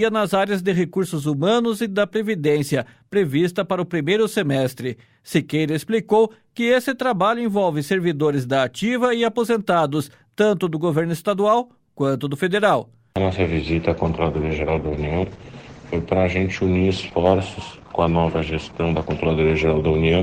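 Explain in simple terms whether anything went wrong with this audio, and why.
Something goes wrong from about 14.08 s to the end: a call bitrate drop. The connection seemed to lose capacity, so the encoder was told to spend far fewer bits on the sound. With so little to work with, it describes the audio more crudely and throws away the brighter top end. The sound turns rough and muffled. It stays at its worst for about 5 seconds and does not recover before the clip finishes.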